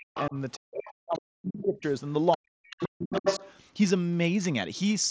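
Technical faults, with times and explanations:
0.00–1.85 s and 2.36–3.41 s, speech suppressed in double talk: the main talker's speech dips, loses its high end or breaks up in pieces, at its deepest about 40 dB down, over roughly one and a half seconds in the first span and around 0.7 s in the second. The likely cause is the echo canceller on the talker's device, which could not separate its own talker from the loudspeaker echo while both were active and turned both down.
0.15–1.19 s, 1.57–1.91 s and 2.32–3.52 s, other side's voice leaking through: a second voice is audible under the main talker, about 10 dB below the speech in the first stretch, about 15 dB below in the second, and roughly level with it in the third. These stretches largely coincide with the suppressed spans. The likely cause is the far side playing on the device's loudspeaker, with the echo canceller failing to remove all of it from the microphone signal.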